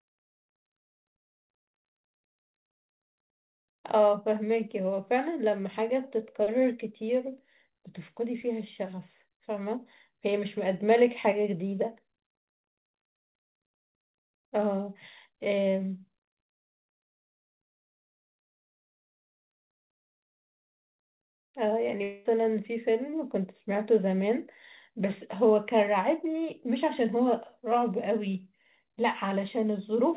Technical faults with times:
1.20-1.41 long network dropout
22.03-22.27 long network dropout

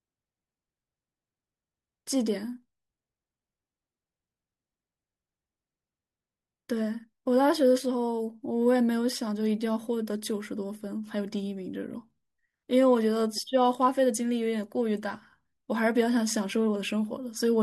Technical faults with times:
none

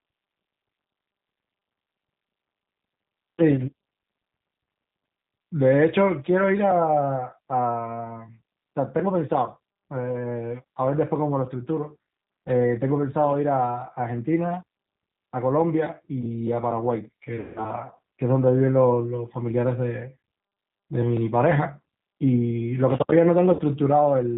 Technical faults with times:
0.00-24.38 G.729 codec
17.40-17.65 VoIP packet loss concealed by the speech codec
23.53-23.62 VoIP packet loss concealed by the speech codec

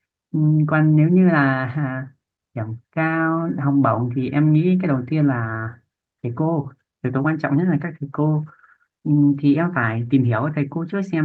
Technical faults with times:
none

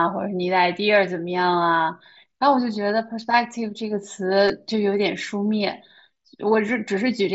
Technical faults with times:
4.48 concealed Bluetooth headset packet loss
6.13-6.15 concealed Bluetooth headset packet loss

